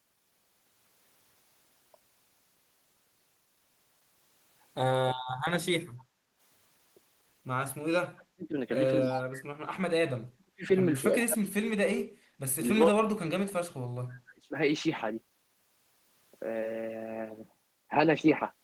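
A speech recording in which an echo canceller repeatedly interferes with the near-end sound. From 5.89 to 6.40 s the background is gated by the echo canceller: the room tone dips by up to about 11 dB for roughly half a second while the loudspeaker plays, then recovers. On a waveform the low-level noise floor visibly narrows over that span, and a spectrogram shows the faint broadband haze thinning to a darker band before it fills back in. Starting at 8.13 s the speech is suppressed in double talk, most likely because the canceller cannot tell the local talker from loudspeaker echo while both sides speak and so clamps everything. The voice collapses by something like 40 dB in four stretches: 8.13 to 8.56 s, 9.05 to 10.66 s, 11.10 to 12.04 s and 12.59 to 14.55 s. These appear as abrupt near-flat gaps in the waveform envelope and as vertical dark slabs cutting through the harmonic stripes on a spectrogram. 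Between 9.02 and 9.22 s there is an echo leak, likely residual loudspeaker pickup that the canceller failed to remove and sent back. It is a copy of the voice delayed by 286 ms and sitting about 10 dB below the direct speech, coming back as a brief scrap. A spectrogram shows a fainter repeat of the formant pattern offset to the right of the original.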